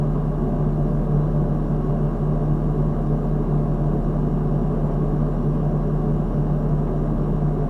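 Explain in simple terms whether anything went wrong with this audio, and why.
Nothing went wrong here: the signal stays steady and intact the whole way, with no breaks, glitches or distortion to point to.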